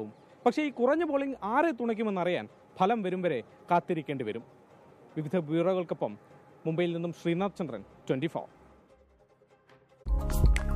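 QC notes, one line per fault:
No faults heard anywhere in this audio.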